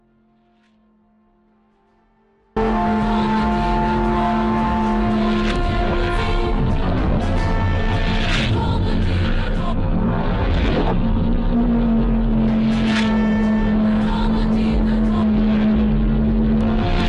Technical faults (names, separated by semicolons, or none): audio dropout to a faint residue